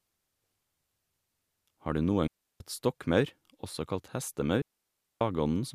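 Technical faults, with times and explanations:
2.27 to 2.60 s and 4.62 to 5.21 s, digital wireless dropout: the speech cuts to near silence for about 330 ms just before "stokkmaur også kalt", then for about 590 ms right after "stokkmaur også kalt". The receiver lost too much data and muted with a quick fade, so you get clean holes with no noise burst either side.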